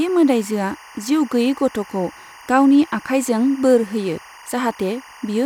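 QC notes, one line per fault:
Throughout, timecode bleed: linear timecode running at 24 frames per second is leaking into the speech path from a neighbouring track or cable. The code is a square wave that flips between two pitches, around 1 kHz and 2 kHz, and the biphase switching makes it sound like a steady chirping warble. It sits well beneath the speech, roughly 25 dB down.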